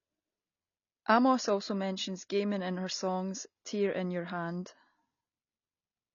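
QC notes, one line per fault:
Throughout, AAC compression: the speech sounds dull and smeared, with plainly audible coding damage and nothing above 6.9 kHz. A spectrogram shows a hard flat ceiling at that cut-off. This is likely a low-bitrate AAC-LC encode, consistent with roughly 24 kbps.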